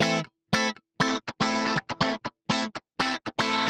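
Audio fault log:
1.09–3.70 s, call bitrate drop: the top end collapses to about 8 kHz and the sound turns coarse and watery, consistent with encoding falling from roughly 48 to 13 kbps.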